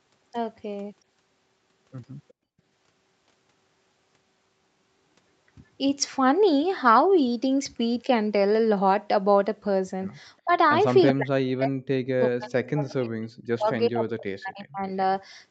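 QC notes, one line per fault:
2.33–2.54 s, background gated by the echo canceller: the room sound drops away sharply, by about 32 dB for roughly 200 ms, then comes back. The canceller clamped the microphone hard while the loudspeaker was playing and released it when it let go.
10.44–10.52 s and 11.13–14.85 s, speech suppressed in double talk: a brief dip of around 25 dB first, then about three seconds of speech that dips, sinking by around 40 dB. The likely cause is both sides talking at once, so the canceller could not separate talker from echo and turned both down.
11.07–11.13 s and 14.59–14.63 s, echo leak: short scraps of a delayed copy of the voice arrive 375 ms late. The first is about 10 dB under the speech and the second is far fainter, around 35 dB down. These are likely from a loudspeaker-side canceller that missed part of what its microphone picked up and sent it back.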